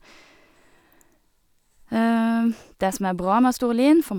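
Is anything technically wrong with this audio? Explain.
No, nothing technically wrong can be heard in this speech recording. There is no audible fault at any point in it.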